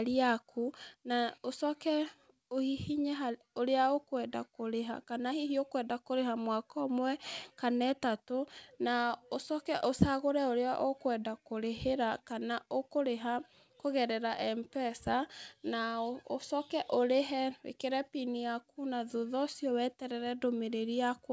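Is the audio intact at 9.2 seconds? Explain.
Yes, the audio is intact at 9.2 seconds, with the speech passing cleanly through the WebRTC call path, whose G.722-style coding leaves nothing above about 8 kHz.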